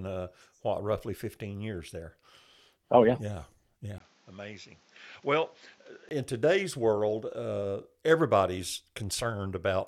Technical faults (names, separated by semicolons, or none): input switched to a poorer device